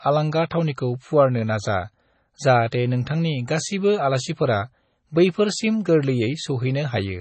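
Throughout the clip, the speech carries the marks of MP3 compression, likely at a very low bitrate, something in the region of 24 kbps. Starved of bits, the encoder has discarded everything above 8.3 kHz and left only the spectral lines its hearing model ranked highest, so weaker detail flickers in and out between frames. The result is a dull, band-limited sound with a watery, swirling texture, and s sounds and consonant edges come across as smeared and metallic.

At 2.71 s there is a pre-echo. The codec spreads the quantisation noise for each transform block evenly across the whole block, so when an abrupt onset lands late in one, noise sized for the loud part also fills the quiet instant before it. Here that noise reaches about 18 ms ahead of the attack, heard as a brief hiss just before the onset, and the attack itself sounds blunted rather than crisp.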